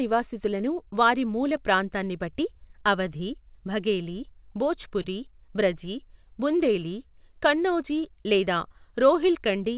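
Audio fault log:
Throughout: clock drift between sender and receiver. The sender's clock runs roughly 2% slow, so the receiver's buffer keeps draining and timing slips recur unevenly.
0.1–5.06 s: scattered short gaps. Several brief packet losses, none much over 20 ms, were patched by extending the last sound, leaving brief ticks and smears.
0.23–9.59 s: repeated timing corrections. The receiver keeps stretching short pieces to match the slow sender, adding around 150 ms overall, heard, if at all, as slight hiccups.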